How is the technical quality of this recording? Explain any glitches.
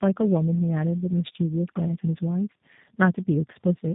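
The quality is poor, because of one fault that runs through the whole clip.

Tandem speech coding, throughout: the speech sounds as if it passed through three low-rate speech codecs in succession, fitting a path that includes G.729A twice. Each stage re-encoded the previous stage's damage, leaving the speech rough, muffled and warbly, with nothing above 3.8 kHz.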